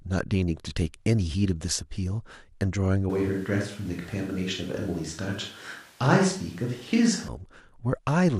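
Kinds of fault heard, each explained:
Switch to a distant microphone: from 3.1 s to 7.28 s the speech abruptly turns roomy and hollow and loses low-end body, then snaps back just as suddenly. The overall level barely shifts, and the room noise sits at around 30 dB below the speech. The likely cause is that the close microphone's feed dropped out and a pickup farther from the talker, such as a camera microphone, carried the recording for that stretch.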